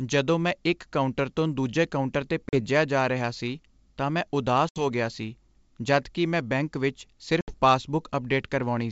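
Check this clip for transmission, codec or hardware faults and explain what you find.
Three dropouts from packet loss on an ADPCM call break up this speech, at 2.49 to 2.61 s (40 ms of audio missing), 4.69 to 4.84 s and 7.41 to 7.57 s (70 ms each). Each gap is filled with silence. The decoder's adaptive predictor and step size then no longer match the sender's, so the speech comes back at the wrong level or with a click and some distortion, settling within some tens of milliseconds. The longer gaps suggest several consecutive packets were lost. On a waveform, each gap is a flat line with abrupt edges. On a spectrogram, it is a full-height blank column, often followed by a thin vertical stripe. The G.722 wideband coding itself leaves little trace.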